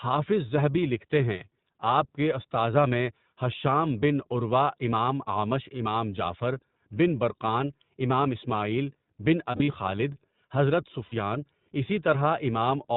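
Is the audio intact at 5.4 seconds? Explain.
No. Just before 5.4 s, from 5.34 to 5.37 s, there is a dropout of lost iLBC frames, between "ھشام بن عروہ امام" and "اعمش امام جعفر بن". The gap matches a single missing 20 ms frame. The decoder filled it by repeating the last pitch cycle blended with noise, so it sounds like a brief, held, faintly buzzy vowel. On a waveform, similar periodic cycles repeat across the gap. On a spectrogram, the harmonics flatten into a short, static, slightly hazy stripe. Because each iLBC frame decodes independently, the sound recovers immediately afterward.

The whole clip also carries the iLBC codec. It is narrowband, consistent with its 20 ms, 15.2 kbps mode, so nothing above 4 kHz survives. A spectrogram shows a hard ceiling at 4 kHz with empty space above it. The frame-by-frame excitation coding gives plainly audible roughness and a synthetic edge to the speech around 5.4 s.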